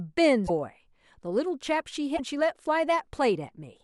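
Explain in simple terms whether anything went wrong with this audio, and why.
The speech glitches twice, briefly skipping ahead, at 0.46–0.50 s and 2.16–2.20 s. The likely cause is a broken MP3 bit reservoir. Lost pieces left later pieces reading the wrong data.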